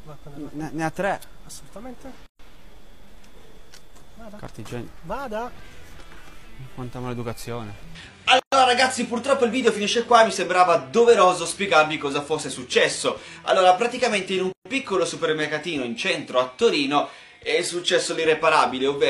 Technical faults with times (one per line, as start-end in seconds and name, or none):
2.26-2.39 gap at a join of encoded pieces
8.39-8.52 gap at a join of encoded pieces
14.52-14.65 gap at a join of encoded pieces